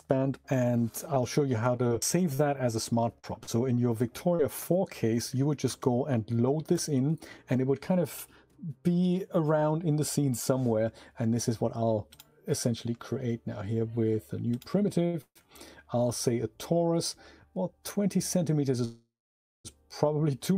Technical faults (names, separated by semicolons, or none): scattered short gaps; short stall from a late packet; call audio freeze